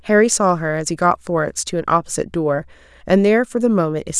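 A short speech recording with no technical faults to report: the signal holds steady throughout, with no dropouts, interruptions or level problems audible at any point.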